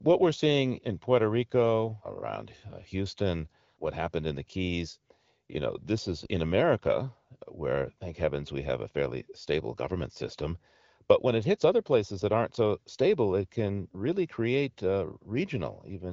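No technical faults are audible.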